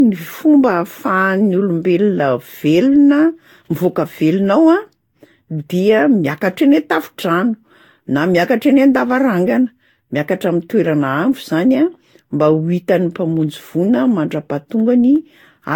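Throughout the speech, the audio was likely decoded and re-encoded around seven times with a lossy codec, consistent with Vorbis near 70 kbit/s. This generation loss piles up quantisation noise and spectral holes, so the sound is swirly, hollow and smeared, with blurred attacks and nothing above 19.2 kHz.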